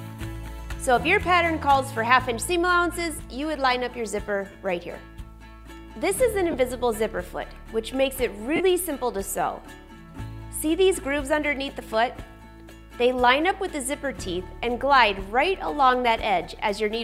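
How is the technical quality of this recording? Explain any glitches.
The recording has four brief dropouts from lost LE Audio frames. They occur at 4.52 to 4.55 s (30 ms), 6.51 to 6.54 s (22.5 ms), 8.56 to 8.61 s (37.5 ms), and at 16.44 s. Frames went missing on the Bluetooth link. The decoder filled each gap by repeating the last spectrum with scrambled phase, fading it as the gap lengthened. The durations fit 7.5 ms frames. Each gap sounds like a short, noisy smear where the sound briefly loses its shape.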